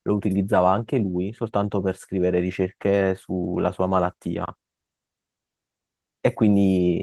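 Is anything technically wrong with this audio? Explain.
Yes, there is a block of digital silence from 4.46 to 4.48 s in this speech. For about 23 ms the sound cuts out abruptly and then returns with no fade, producing a short hole. On a waveform this looks like a flat line; on a spectrogram it is a blank vertical stripe.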